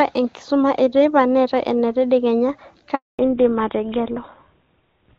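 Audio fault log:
2.95–3.19 s, handover gap: At 2.95 s the speech dies away within a few tens of milliseconds and stays silent for 240 ms. The call was switching networks and no speech frames arrived during the transfer, so anything said in that span is lost.
3.19 s to end, fallback to narrowband: Before the switch the HD Voice speech sounds clean and wideband, consistent with AMR-WB at about 23.85 kbit/s. After the gap, all content above 4 kHz disappears and the speech sounds duller and rougher, which fits a drop to GSM full rate at 13 kbit/s.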